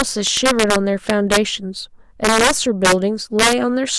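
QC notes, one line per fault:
Throughout, integer overflow: violent cracks burst out on the loudest peaks of the speech, far harsher than clipping. With about 6 dB of overdrive, a small fraction of samples, around one or two percent, exceed the integer limit and wrap to the opposite sign instead of being held.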